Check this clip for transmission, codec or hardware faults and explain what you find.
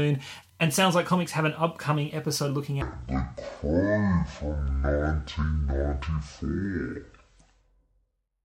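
One fault is present, a section at the wrong speed. From 2.82 s, just after "an upcoming episode looking", until 8.45 s, the speech runs at 0.505× speed, likely from being clocked at the wrong rate. Because pitch follows speed, it drops around ten semitones, sounding deep and dragged.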